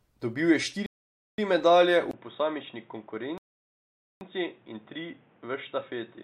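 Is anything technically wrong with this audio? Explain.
Yes. From 0.86 to 1.38 s, and again from 3.38 to 4.21 s, there is a rebuffering stall: playback ran out of buffered data, fell silent, then resumed exactly where it stopped. Each pause adds time without losing any speech: about 0.52 s before "medalje v", then 0.83 s.

From 2.11 s to the end, just after "medalje v", the audio likely had its input switched to a poorer device. After a 20 ms gap it turns dull, with nothing above 3.8 kHz, drops by roughly 5 dB, and carries new background noise about 30 dB below the speech.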